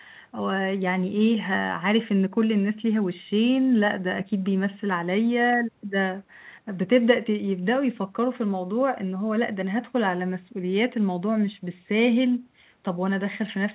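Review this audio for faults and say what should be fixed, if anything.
Nothing here needs fixing; no faults are audible.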